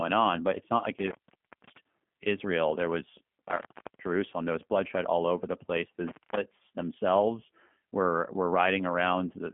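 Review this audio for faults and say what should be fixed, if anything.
The whole speech clip carries G.729 codec damage. The band stops near 3.4 kHz with nothing above 3.5 kHz, and the voice has the rough, buzzy, slightly synthetic texture of a CELP coder rebuilding each 10 ms frame from a filter and a few pulses. That fits an 8 kbit/s G.729A stream. Unlike plain low-pass filtering or a low sample rate, the damage is in the texture itself, not just the missing top. Prevention: use a wideband codec such as G.722 or Opus end to end.

There are three intermittent contact dropouts:
0.99–1.78 s, just after "but it's not like", with the line open about 0.57 s.
3.48–4.08 s, just before "there was bloodshed all", open about 0.39 s.
6.07–6.37 s, just before "themselves were were", open about 0.22 s.
Each one is a momentary open circuit. The sound drops to faint hiss with crackle at both edges. 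Packet loss would instead leave smooth concealment or repeated fragments, with no crackle and no hiss floor. Prevention: reseat or replace the cable and connectors and strain-relieve them.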